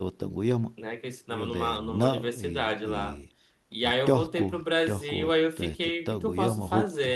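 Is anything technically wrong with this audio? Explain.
No, nothing technically wrong.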